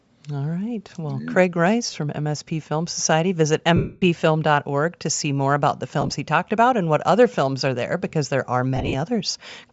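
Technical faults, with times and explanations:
Throughout: Bluetooth LC3 compression, likely at a setting that fits 48 kbps with 7.5 ms frames. The upper spectrum is zeroed and noise-filled, so the speech sounds breathy and grainy.
1.86–1.96 s, 3.76–4.02 s, 6.01–6.14 s, 8.76–8.95 s: lost LE Audio frames. The decoder reuses the last spectrum with random signs, smearing the speech into noise. The unbroken 255 ms gap at 3.76 s fades gradually toward silence.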